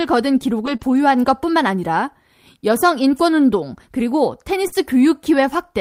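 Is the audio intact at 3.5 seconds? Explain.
Yes, the audio is intact at 3.5 seconds, with no fault heard at that point.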